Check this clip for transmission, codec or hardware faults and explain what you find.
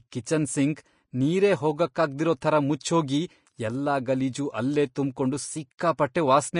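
There's one codec problem, running through the whole speech clip. Nothing survives above about 10.5 kHz, and the treble sounds hissy and grainy, with roughened tones and softened consonant attacks. That's likely Vorbis compression at a low bitrate, around 34 kbps, coarsely quantising the upper detail into noise.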